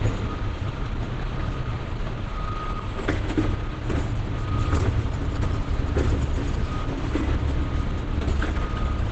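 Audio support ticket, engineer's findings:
Muffled, hoarse throughout, with heavy damage and nothing above 8.6 kHz. Likely Opus compression: a wideband encode at a very low rate, fitting roughly 12 kbps, with the encoder in its speech-oriented SILK mode, so the top end is lost and detail is roughened.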